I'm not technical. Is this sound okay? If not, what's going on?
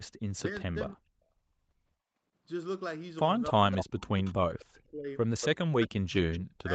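No, this call has two problems.

The first is speech suppressed in double talk. When both people spoke at once, the call's echo canceller likely couldn't tell this talker apart from the echo of the other person and turned everything down. You hear the speech dip almost to silence or break into pieces from 0.40 to 1.21 s, 3.54 to 4.10 s, 4.42 to 5.09 s and 5.67 to 6.71 s.

The second is echo leak. On the side using a loudspeaker, the echo canceller likely failed to remove all the sound its microphone picked up, so some was sent back. It arrives about a quarter of a second late as a short repeated scrap, fairly noticeable at 3.80 s and 5.41 s, faint at 6.33 s, and a longer faint stretch from 4.18 to 4.64 s.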